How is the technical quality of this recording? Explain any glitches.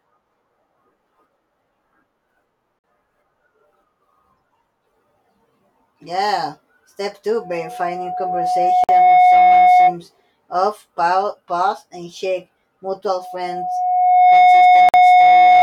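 The recording has two problems: recurring dropouts at chunk boundaries and two bouts of feedback.

Gap between chunks: the speech was delivered in 6-second chunks with 50 ms of silence left at each join, so sound breaks off abruptly at 2.79, 8.84 and 14.89 s, leaving short, hard-edged holes at a steady spacing.

Loudspeaker feedback squeal: the microphone picked up its own loudspeaker, and at 728 Hz the loop gain passed unity. That tone grew by itself over about 2 s from 7.33 s to 9.97 s, and over about 1.5 s from 13.14 s to the end, swelling into a squeal roughly 15 dB above the speech.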